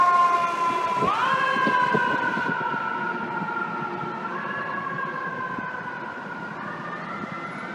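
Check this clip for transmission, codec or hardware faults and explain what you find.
One fault is present. De-emphasis applied wrongly, from 2.49 s to the end: a treble cut slopes smoothly downward, about 8 dB lower at 10 kHz than 1 kHz, leaving the audio dull and muffled.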